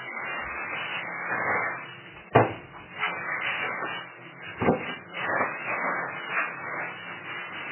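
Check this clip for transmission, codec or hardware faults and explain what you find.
One fault runs through the whole clip. From start to finish the sound is dull and watery, with nothing above 3 kHz, swirling artefacts and smeared attacks. This is likely heavy MP3 compression: starved of bits, which fits a very low rate around 8 kbps, the encoder cuts the treble and drops weak frequency lines from frame to frame.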